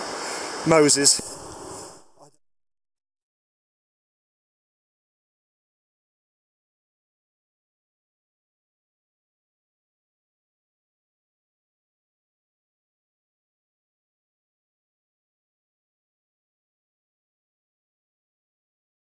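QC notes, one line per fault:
No faults heard anywhere in the clip.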